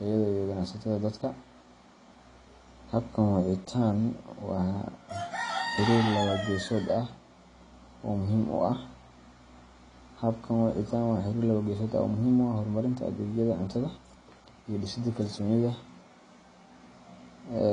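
From start to finish the speech carries AAC compression damage that is plainly audible: the sound is dull and smeared, with a watery, fizzy edge on sibilants and held vowels. The likely cause is an AAC-LC encode at a low bitrate, which fits something near 32 kbps, where the coder starves high bands and coarsely quantises the rest. A spectrogram shows a flat ceiling with nothing above 10.2 kHz, plus patchy holes and blurred time detail below it.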